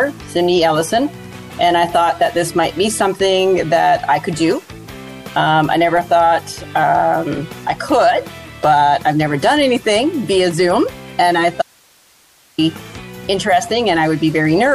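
The signal path most likely lost its wanted input for just under a second while the chain downstream stayed live, causing an audio dropout to a faint residue. From 11.62 s to 12.58 s the audio cuts out abruptly mid-flow, leaving only hiss roughly 35 dB below the normal level. The sound then returns just as suddenly. The hard edges at both ends set it apart from a natural pause or a fade.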